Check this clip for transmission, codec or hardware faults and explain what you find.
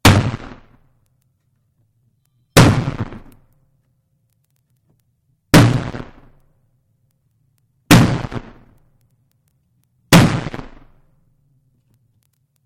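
Hard clipping occurs in five short bursts, at 0.05–0.17 s, 2.57–2.67 s, 5.54–5.64 s, 7.91–8.01 s and 10.13–10.23 s. Peaks exceed the stage's ceiling by about 11 to 12 dB and are sliced flat, producing harsh crackle, flat-topped waveform plateaus and bright vertical smears of high harmonics on a spectrogram.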